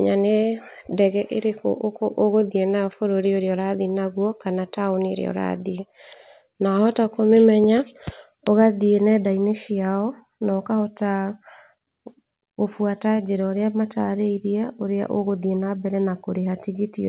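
A loud pop, two sharp clicks in quick succession, occurs from 7.64 to 7.80 s in the speech, peaking a few decibels above the surrounding level. The cause is likely a sudden jolt of voltage, from a connector, switch, static discharge or driver glitch, added to the signal. The following circuitry shapes each pulse into a thump while the speech continues underneath, band-limited below 4 kHz by the call path's 64 kbps G.711 coding.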